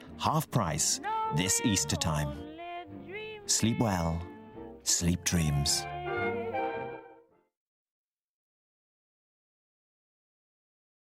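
No technical faults can be heard anywhere in this clip. Nothing in the audio calls for comment on the technical side.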